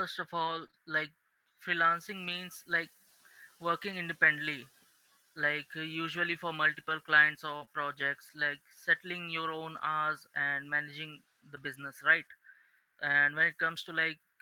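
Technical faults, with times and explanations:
0.39 to 10.75 s, scattered short gaps: About four brief packet losses, 100 ms of audio in all, none longer than about 40 ms, occur across this stretch of speech. The receiver covered each hole by extending the preceding sound, and its smoothing touched roughly 380 ms in total, so each loss is heard as a tiny tick, smear or hiccup. On a waveform these look like short repeated cycles. A spectrogram shows brief smeared vertical stripes where the harmonics stop changing.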